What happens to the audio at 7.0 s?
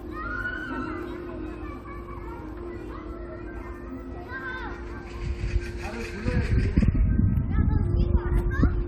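Nothing goes wrong at 7.0 s; the audio plays through that moment intact, with no dropout, glitch or other fault.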